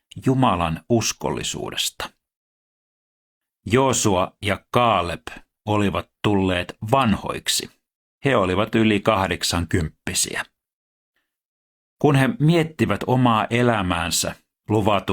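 A speech recording, and nothing is technically wrong with it.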